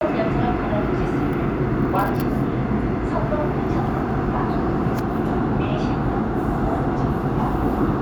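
No technical faults are audible anywhere in the audio.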